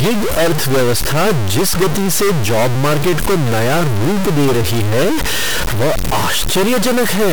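Stuck bit, throughout: the speech has a harsh, buzzy distortion, and pauses fill with loud noise instead of silence. The likely cause is a high data bit held fixed, pushing about half the samples off by a large step, near 10 dB below full scale.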